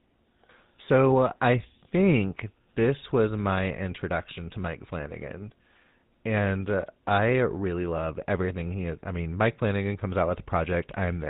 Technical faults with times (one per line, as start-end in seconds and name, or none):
0.00-11.29 GSM full-rate codec